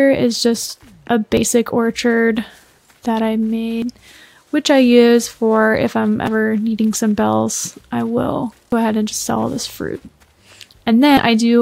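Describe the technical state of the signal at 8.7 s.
At 8.72 s there's a skip: a small slice of sound, around 50 ms, just isn't there, and the material on either side butts straight together with no gap of silence in between. That's most likely audio missing between chunks. The recording chain seems to handle the signal in blocks of about 2.5 s, and while it closes one block and opens the next, a sliver falls through the crack, so you hear a jump rather than a dropout.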